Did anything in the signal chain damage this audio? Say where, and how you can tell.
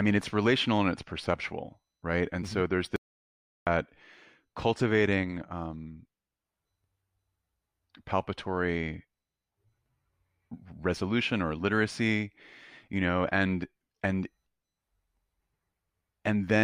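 Yes. Just after "so there's", at 2.96 s, the speech cuts to silence with no room tone until 3.67 s, about 0.71 s lost: an audio dropout to silence. The likely cause is a capture input or link failing while the recorder kept writing silence.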